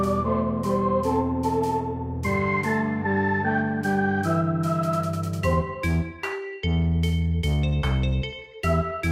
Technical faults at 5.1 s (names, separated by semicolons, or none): none